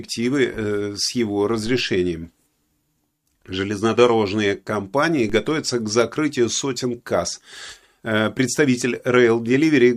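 At 1.67 s, just after "э с его", the zero line of the speech waveform jumps by about −24 dBFS: a DC step. It is heard as a low thump while the speech carries on unchanged, and the offset then decays away as if through a high-pass near 2 Hz. A second identical DC step lands at 5.30 s, just before "к закрытию сотен касс", with the same thump and the same slow decay.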